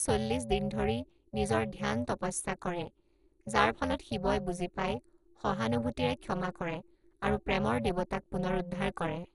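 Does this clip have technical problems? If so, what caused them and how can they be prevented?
Yes. Throughout, the speech is dull and gurgling. This is likely heavy MP2 compression, fitting a rate near 56 kbps, which switches off upper sub-bands. Prevent it by using a higher bitrate or a modern codec.

Overlap-add ripple also runs throughout. The level pulses at roughly 300 Hz, dipping by about 60 dB, because frames were rejoined with mismatched windows. Prevent it with windows whose overlap sums to constant gain.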